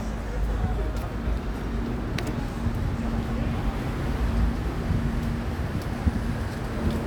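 Nothing in this recording jumps out as a technical problem; it just carries on from beginning to end without a hitch.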